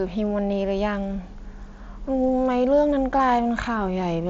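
Concealed Bluetooth headset packet loss at 2.27 s: about 15 ms of speech, consistent with two lost frames, was patched by repeating recent waveform, leaving a brief buzzy blip over the mSBC wideband audio.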